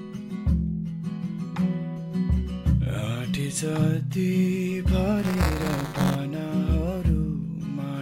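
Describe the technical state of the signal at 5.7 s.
Buffer tearing runs from 5.18 to 6.15 s: writer and hardware reader have slipped, so a small slice of each 5 ms period replays audio about 10 ms old between hard joins. Unlike underrun gaps, nothing goes silent; a 200 Hz rattle rides the signal.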